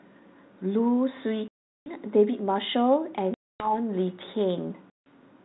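Speech that drops to dead silence with hard edges three times: from 1.48 to 1.92 s (about 380 ms missing), from 3.34 to 3.74 s (260 ms), and from 4.9 to 5.1 s (160 ms). Each time the speech comes back slightly distorted, with some roughness that clears within tens of milliseconds. This is packet loss on an ADPCM call. Runs of lost packets were filled with silence, and the receiving decoder's adaptive predictor and step size drifted away from the sender's, so the first samples after each gap are rebuilt from the wrong baseline until the adaptation re-converges. The call runs through G.726 ADPCM at 32 kbit/s, the DECT cordless rate, with nothing above 4 kHz and only light codec damage.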